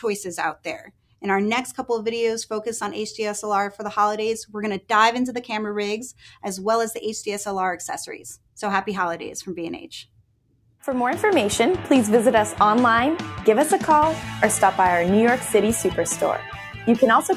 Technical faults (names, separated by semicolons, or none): noise suppressor applied to music or sounds; sound cut by the noise suppressor